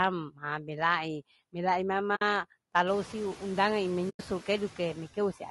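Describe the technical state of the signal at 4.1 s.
The sound fades out softly and back in, leaving a gap from 4.09 to 4.21 s. This is AAC frame loss with muting: about 100 ms of coded frames went missing, and the decoder zeroed their spectrum so the overlapping windows ramp it down and up.

Around that gap, the room noise that rose near 3 s is pulled down by about 16 dB between sounds and surges back underneath them. Those are noise suppressor artifacts from frame-by-frame band attenuation.

The sound is also plainly rough and grainy, with noise between harmonics and a dull top band. This is low-delay AAC compression, likely AAC-ELD at a bitrate around 32 kbps, where its short frames resolve pitch poorly.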